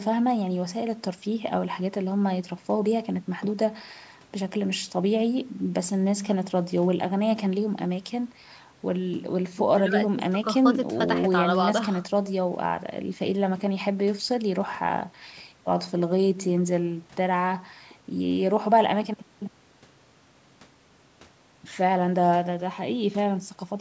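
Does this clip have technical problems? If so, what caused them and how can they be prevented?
No, this clip has no technical problems, so there is nothing to prevent.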